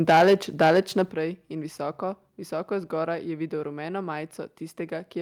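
Speech that opens with microphone overload from 0.08 to 0.35 s and again from 0.61 to 1.02 s. The peaks run flat against the converter ceiling, about 7 dB over in the first stretch and about 6 dB over in the second. Roughly a fifth of the samples in the first burst and about one in twenty in the second lose their tops, which gives the loudest syllables a harsh, crackling edge. The likely cause is an input gain set too high for the talker's level. The microphone volume is also stepped down twice, at 0.1 s by about 3 dB and at 1.11 s by about 9 dB. Each time, voice and background drop together in a single abrupt step rather than a smooth fade. The first step comes while the opening burst is still distorting, and the second comes just after the later one, so these cuts are likely the call software reacting to the clipping by lowering the device input level.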